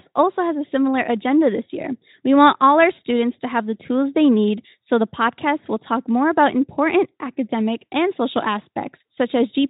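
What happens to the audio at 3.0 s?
At 3.0 s the speech plays through intact, with no dropout, distortion or other fault at that moment.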